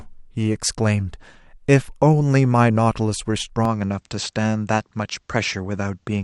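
At 3.65 s the speech turns duller and stays that way to the end, most likely because the input switched to a poorer device in mid-recording. Everything above 8.2 kHz vanishes, so a spectrogram shows the upper band suddenly cut flat from that point, with a faint new noise floor some 55 dB below the signal. There is no gap at the change, and the waveform's overall level stays about the same.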